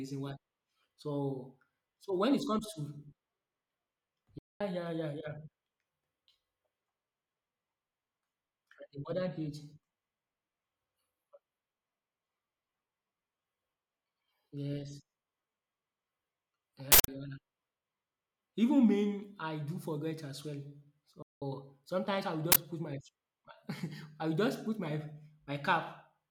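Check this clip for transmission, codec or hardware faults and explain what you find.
The speech has two kinds of playback fault, each occurring twice.

Playback stall: the speech cuts out mid-flow from 4.38 to 4.61 s (about 0.22 s) and from 21.22 to 21.42 s (about 0.19 s), then carries on. The likely cause is a player that ran short of data or had its thread blocked. The waveform drops to a flat line and the spectrogram shows a blank vertical gap.

Uninitialised buffer: a loud burst of digital noise fills 16.92 to 17.08 s (160 ms), and a loud crack sounds at 22.52 to 22.56 s (40 ms). Those blocks were played before audio was written to them, so leftover memory was read as samples. The waveform shows jagged blocks and the spectrogram shows bright broadband slabs.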